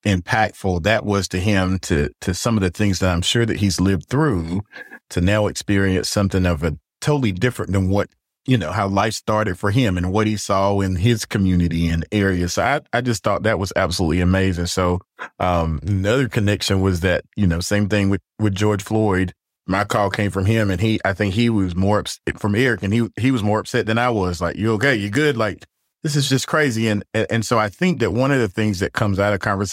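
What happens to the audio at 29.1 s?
At 29.1 s the audio is intact, with no dropout, click, distortion or other fault at that moment.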